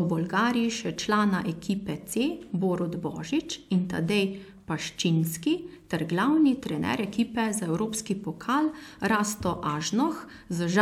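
No technical faults turn up anywhere in this speech recording, so there's nothing to flag here.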